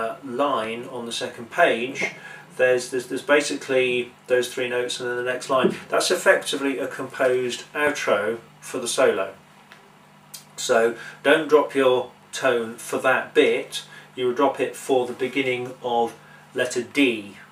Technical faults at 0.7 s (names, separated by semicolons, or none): loud pop